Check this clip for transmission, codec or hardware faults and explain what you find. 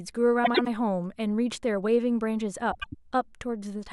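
Two spots of frames out of order in this speech, 0.44–0.67 s and 2.71–2.95 s: adjacent runs of roughly 0.1 s, which fits four-frame runs, get swapped, so each stretch flutters.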